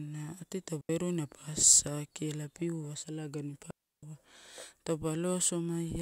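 Two digital wireless dropouts break the speech. The first runs from 0.81 to 0.89 s, a mute of about 84 ms. The second comes right after "ela piua salagani pa", from 3.71 to 4.03 s, lasting about 322 ms. In each case the wireless link lost too much data. The receiver muted rather than play damaged audio. Each gap is a clean hole of near silence. There is no noise burst at either edge.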